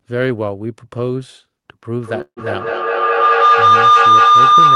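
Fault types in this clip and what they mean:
Feedback howl: A microphone-to-loudspeaker loop gains level each pass, so from 2.01 s a tone around 1 kHz swells to about 12 dB above the speech, repeating roughly every 200 ms.
Call audio freeze: Packets were likely delayed until the jitter buffer emptied, so at 2.21 s the last sound stretches into a fading buzz or hiss, then about 70 ms of silence, before speech resumes intact.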